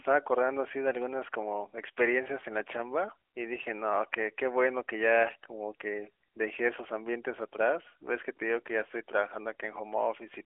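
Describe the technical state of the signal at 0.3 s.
At 0.3 s the signal is intact, with the narrowband mobile-codec character that runs through the whole clip and no fault at that moment.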